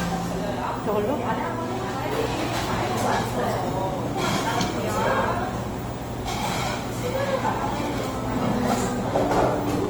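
From start to finish the audio carries Opus compression artefacts, plainly audible throughout. Tonal parts sound rough and grainy, with a noisy, hashy texture where clean sustained content should be, yet there is little of the watery swirling typical of MP3. The top end stays open up to about 20.2 kHz. The likely cause is the codec's music mode filling bit-starved bands with folded or synthetic noise, consistent with a bitrate around 24 kbps.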